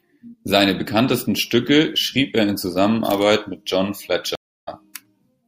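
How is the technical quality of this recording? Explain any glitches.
The speech drops out at 4.35 s for about a third of a second (315 ms) and comes back at 4.69 s slightly further along, skipping a sliver of roughly 50 ms. That is a stream reconnect: the connection broke, the player went silent, then rejoined the live stream with a fresh decoder.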